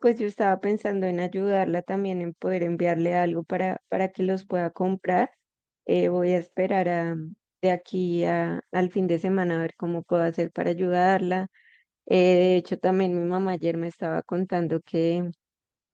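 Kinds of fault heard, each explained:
No kinds of fault are heard in this clip.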